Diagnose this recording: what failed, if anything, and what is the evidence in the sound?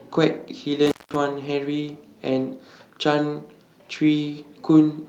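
Intermittent contact in the analogue wiring, from 0.86 s to 1.16 s: the speech drops out for roughly 190 ms inside that window, with crackle at both edges where the signal is broken and restored. A loose plug or cable conductor briefly lost connection, so the signal path opened. The ragged, crackling edges of the gap point to a physical connection separating and re-seating rather than a clean digital dropout.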